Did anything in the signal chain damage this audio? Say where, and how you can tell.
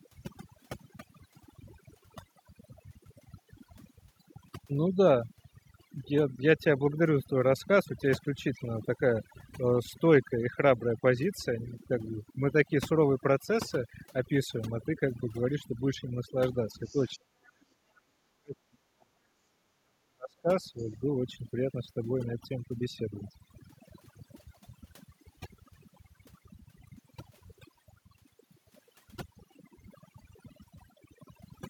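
Yes. Overdone noise removal runs through the whole clip, at the call-processing stage. The background is near silence with twinkling specks, because a noise suppressor set too hard keeps zeroing individual frequency bands near its noise estimate.

Other side's voice leaking through appears at 16.85 to 17.1 s, about 30 dB below the talker, and again at 20.78 to 20.85 s, about 35 dB below. These are faint scraps of a second voice, likely loudspeaker echo that the echo canceller failed to remove from the microphone.

Speech suppressed in double talk occurs at 16.93 to 17.89 s, 18.28 to 19.17 s and 19.59 to 20.77 s. In each span the talker's speech drops by as much as about 40 dB, for roughly 0.7 s in total. The cause is likely an echo canceller that could not separate near speech from echo and ducked both.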